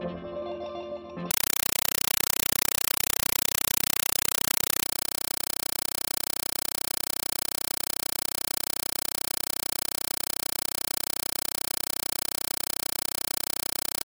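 From 1.31 s to the end, a compressed stream was played as audio: an AC-3 bitstream was passed on undecoded and treated as ordinary samples. Each data frame becomes a 5.33 ms noise burst then padding, 31.25 times a second, replacing the sound with chattering static.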